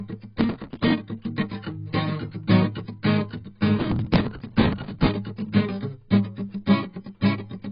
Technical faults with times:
0.00-7.71 low-bitrate audio saved at a high bitrate

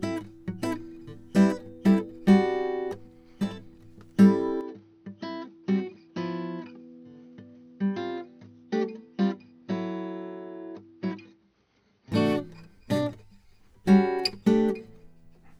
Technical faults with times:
4.61-12.12 input switched to a poorer device

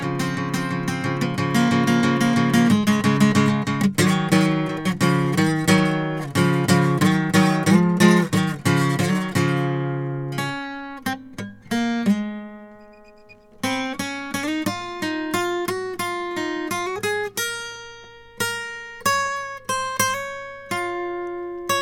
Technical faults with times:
none

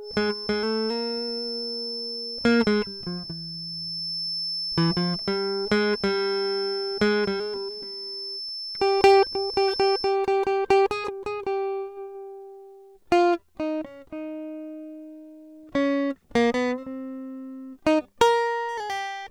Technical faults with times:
0.00-10.18 feedback whistle

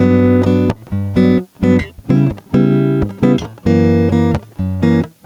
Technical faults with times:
0.00-5.26 gain pumping

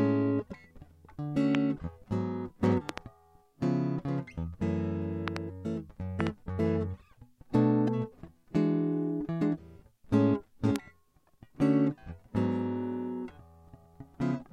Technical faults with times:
1.55-1.57 loud pop
2.89-3.00 loud pop
5.28-5.38 loud pop
6.20-6.29 loud pop
10.76-10.78 loud pop

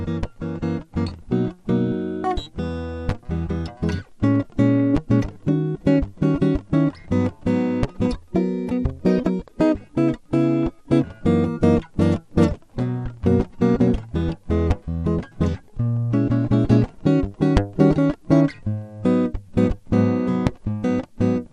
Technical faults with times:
0.00-21.52 MP2 compression
10.85 DAB burbling
21.08 DAB burbling

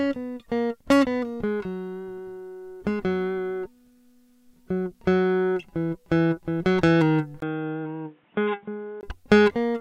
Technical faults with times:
7.40-9.03 input switched to a poorer device

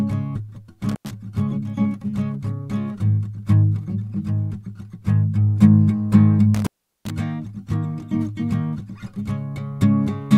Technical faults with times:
0.89-1.11 intermittent contact
6.55-7.11 intermittent contact

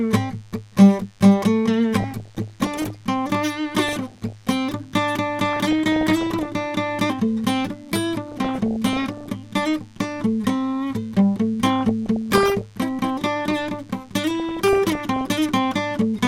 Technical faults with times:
0.00-16.28 DECT cordless phone buzz
2.00-2.96 DAB burbling
3.87-4.48 DAB burbling
5.46-6.45 DAB burbling
8.28-9.27 DAB burbling
11.70-12.62 DAB burbling
14.31-15.27 DAB burbling

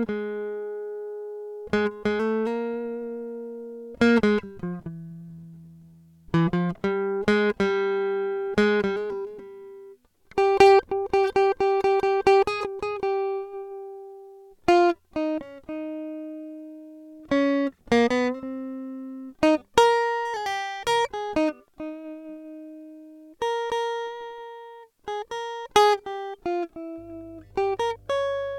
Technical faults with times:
26.98-28.58 mains hum

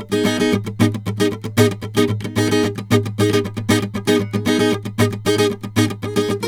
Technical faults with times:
none

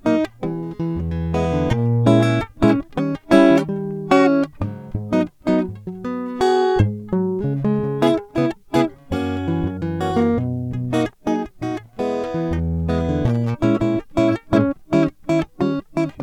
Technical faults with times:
none

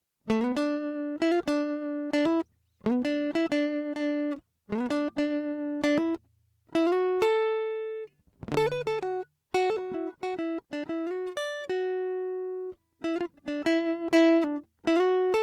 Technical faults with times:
none

